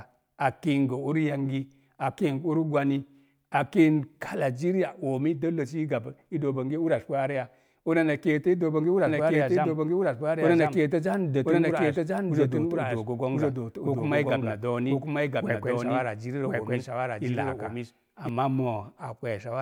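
The speech is likely being captured a second time through a slower path from 9.07 s to 18.29 s, just after "keeto i dook bonge". This doubled audio track lays an equally loud copy about one second behind, dry and abrupt at both ends.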